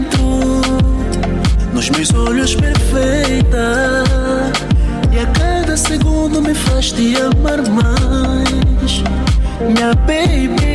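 Nothing stood out on listening to this audio.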